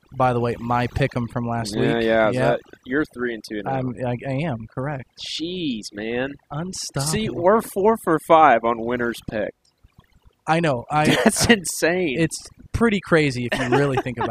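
From the start of the speech to its end, overdone noise removal is at work. A noise reduction stage was pushed too hard. It cuts individual frequency bands deep or off whenever they sit close to its noise estimate. Quiet parts of the voice fall below that line and vanish too. Between phrases, the background drops and breaks up, dotted with twinkling specks.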